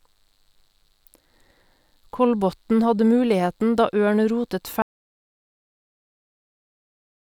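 At 4.82 s the speech stops abruptly and the clip stays in an audio dropout to silence through to the end, about 2.5 s of silence. The input was likely lost, perhaps through a disconnected device or a stray mute, while recording carried on writing empty samples. Unlike a fade-out or a noise gate closing, nothing tapers and no room tone or hiss remains, so the cut is instant and the gap is completely dead.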